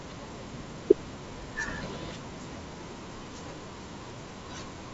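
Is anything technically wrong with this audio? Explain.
No, nothing here is actually wrong: it's speech carried over G.722 wideband telephone coding at 64 kbit/s, so the top end simply stops at about 7.7 kHz, which is just how that link is built.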